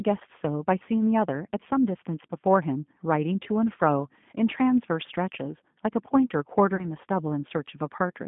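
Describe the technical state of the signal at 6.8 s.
At 6.8 s you're right inside a VoIP packet loss concealed by the speech codec, running from about 6.76 to 6.85 s. About 30 ms of audio, which points to three lost 10 ms frames, never arrived. The decoder filled the gap by stretching its last pitch and filter settings with falling gain, so the sound smears into a brief buzzy tone or coloured noise that fades, and stays weak or distorted just after.

Underneath that is the G.729 codec carried through the whole clip. At 8 kbit/s it rebuilds speech from a vocal tract model plus a few pulses per frame. The line band only spans roughly 150 Hz to 3.5 kHz, so the speech sounds thin, slightly rough and synthetic, and the codec damage is plainly audible.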